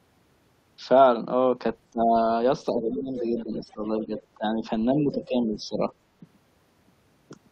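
At 1.92 to 2.16 s the speech is suppressed in double talk. The level drops sharply, by something like 20 dB at its deepest, so the speech nearly vanishes for a moment. The likely cause is an echo canceller that heard both sides at once and turned everything down. From 2.71 to 4.61 s the same suppression returns in a milder form, dipping by around 10 dB in patches across about a second of that span.

Inside that stretch the other side's voice leaks through. At 2.89 to 3.01 s a brief scrap of it sits roughly 10 dB below the speech. From 3.37 to 4.26 s a longer, fainter trail of it runs about 20 dB down. The likely cause is loudspeaker echo that the canceller failed to remove. These leaks differ from the suppression: they add a second voice rather than taking level away.

From 4.94 to 5.82 s the speech is suppressed again, by around 10 dB. A tiny leak of the other voice, around 25 dB down, slips in at 5.23 to 5.27 s.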